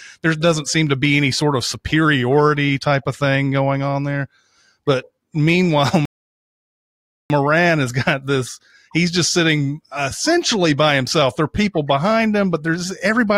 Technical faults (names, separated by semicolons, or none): rebuffering stall